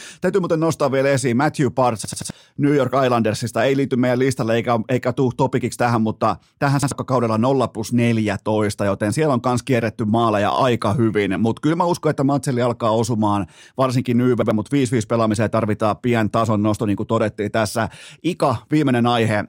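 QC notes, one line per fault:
2.05–2.30 s, 6.83–6.91 s, 14.42–14.51 s, repeated buffer: late audio made an 85 ms slice replay, three extra times first, once later, fitting a 4096-sample buffer. It sounds like a stutter, roughly 0.3 s then 0.1 s lost. Waveform and spectrogram show identical blocks with vertical seams.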